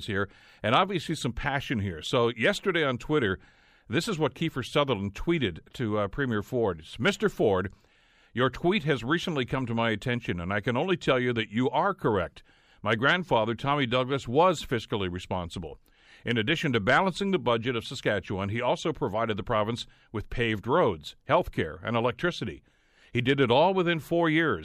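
No technical faults are audible anywhere in this speech recording.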